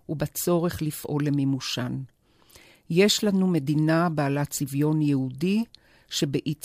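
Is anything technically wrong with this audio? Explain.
No, nothing is technically wrong with this audio.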